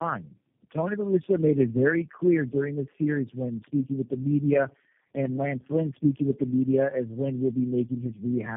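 Tandem speech coding runs throughout: repeated decode-and-recode passes, consistent with four low-rate speech codecs in a row, leave the speech rough, muffled and warbly, with nothing above 3.2 kHz.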